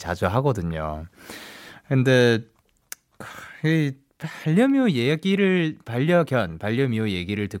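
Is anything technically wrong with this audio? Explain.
No, nothing technically wrong turns up anywhere in this speech recording, so there's nothing here to flag.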